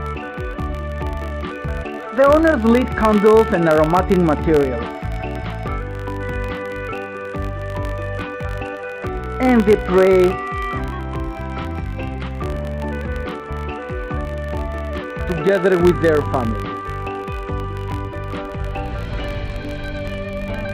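A steady buzz at about 46.9 Hz runs under the whole clip, rising and falling with the level of the audio. That's a filter restarted on every block: the filter drops its state at each boundary and kicks off a tiny transient, at a rate that fits 1024-sample blocks.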